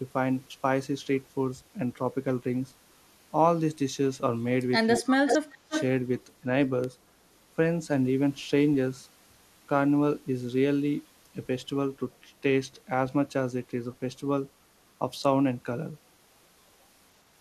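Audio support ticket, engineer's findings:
Speech ducks hard, about 35 dB at its deepest, 4.98–5.30 s and 5.47–5.72 s. Likely speech suppressed in double talk: the echo canceller couldn't separate the talker from the loudspeaker echo and attenuated both.

Delayed copy of the speech, 353 ms behind, at 5.26–5.39 s (about level with the speech) and 5.70–5.84 s (about 5 dB down). Likely echo leak: residual loudspeaker pickup passed by the far-end canceller.

Single sharp broadband tick at 6.84 s. Bit error spike: three consecutive samples corrupted in memory or on a digital link, jumping and returning instantly.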